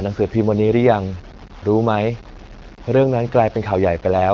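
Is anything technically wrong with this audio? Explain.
Yes. Throughout the speech there is grainy distortion that follows the signal, likely from low bit depth without dither. Coarse rounding, consistent with about 6 bits, leaves error roughly 25 dB down. On a waveform it appears as visible staircase steps, and on a spectrogram as a haze that tracks the speech.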